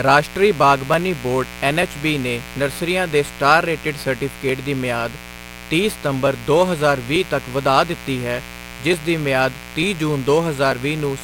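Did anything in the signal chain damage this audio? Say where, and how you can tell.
Yes. A raspy mains buzz runs throughout, about 15 dB below the speech. It is built on 60 Hz harmonics, which points to spikes entering the analogue wiring.

Clicks recur every 0.89 s from 0.94 to 10.72 s, about ten in all. These are likely clock drift buffer slips, where mismatched device clocks force small sample drops or repeats.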